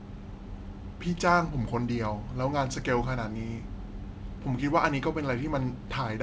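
No technical faults are audible.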